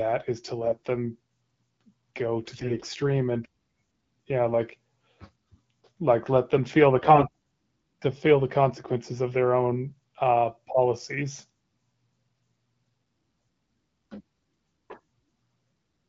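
Speech that sounds clear enough to fit AMR-WB at 12.65 kbit/s, hit by AMR bit errors at 0.62–0.86 s after "is to", 2.44–2.88 s, and 7.01–7.25 s after "let them feel the". The voice turns hoarse and gargly but keeps its pitch and level, with no gaps or repeated fragments, which is what separates flipped bits from lost packets.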